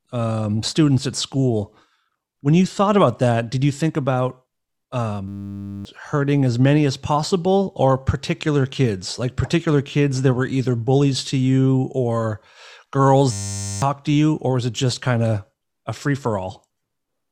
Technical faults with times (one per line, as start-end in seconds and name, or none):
5.28-5.85 system hang loop
13.32-13.82 system hang loop